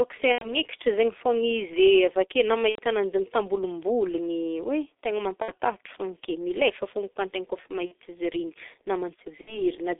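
Throughout, the G.723.1 codec at 6.3 kbit/s makes the speech muffled and hoarse. The spectrogram shows an empty band below 300 Hz and above 3.6 kHz, with smeared consonants.

VoIP packet loss concealed by the speech codec occurs at 0.33–0.56 s, 2.69–2.79 s (after "avake na"), 5.42–5.51 s (after "am tambolomboligny hoe tegna"), 7.85–7.93 s (after "koa antegna koa efa") and 9.41–9.61 s. The first two gaps lose about 90 ms and the rest about 60 ms. In each, the decoder stretches the last sound it had and lowers its level frame by frame, so the waveform shows the signal shrinking through the gap.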